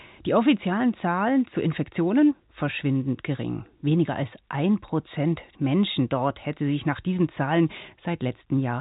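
No faults are present in this speech clip; it carries the narrow telephone band of G.711 A-law coding, with nothing above 4 kHz.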